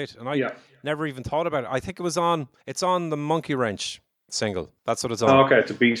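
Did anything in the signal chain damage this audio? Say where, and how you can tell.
Yes. Call processing added an automatic gain rise. From 0.17 s to 3.86 s the speech and the background noise swell together by about 6 dB. The gain control judged the input too quiet and slowly raised its gain, lifting everything at once.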